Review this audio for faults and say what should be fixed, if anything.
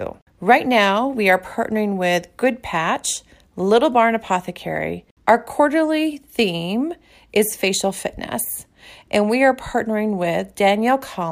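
A single sharp click sounds at 8.46 s. The likely cause is dropped samples. A couple of samples, a fraction of a millisecond, went missing, so the waveform jumps to a later value. No speech is lost. Prevent it by giving the capture buffer enough headroom.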